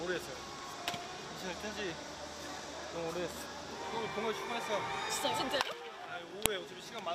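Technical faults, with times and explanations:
6.46 s, file header played as audio: a single sharp, loud snap where a second WAV piece begins, because its few dozen header bytes were read as samples rather than stripped. Unlike an ordinary splice click or a dropout, it is loud whatever the surrounding sound is doing.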